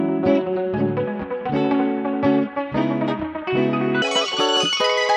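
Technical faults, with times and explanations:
4.02 to 5.17 s, audio read two samples at a time (double speed): From 4.02 s, the sound runs twice as fast and an octave higher, 12 semitones up. Pairs of samples are taken as one frame, which halves the duration.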